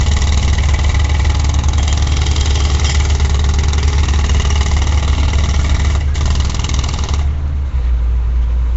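A rough, hissy halo and a smeared, underwater blur run through the whole clip, and nothing is heard above about 7.7 kHz. This is likely Nellymoser compression, Flash's low-rate microphone codec, fitting roughly 32 kbps, which fills starved bands with noise.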